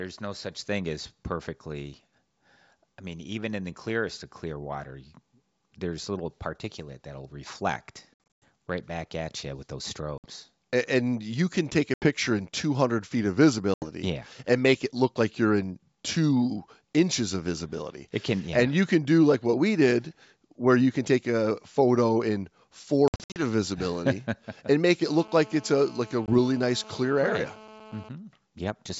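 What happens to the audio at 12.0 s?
Packet loss on an ADPCM call, 11.94 to 12.07 s: about four packets' worth of audio drops to silence, and the decoder's predictor then resumes out of step, so the speech returns slightly distorted before it settles.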